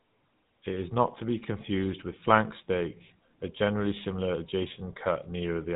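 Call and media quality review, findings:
GSM full-rate codec artefacts throughout speech. Buzzy, gravelly roughness, plainly audible; band ends near 3.8 kHz. Probable component: GSM full-rate leg, bitrate consistent with 13 kbps. Mechanism: vocal-tract model excited by sparse regular pulses, coarse excitation producing buzz.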